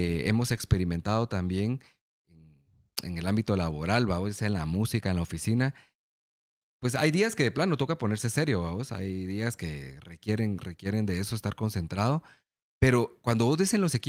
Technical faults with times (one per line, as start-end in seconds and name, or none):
none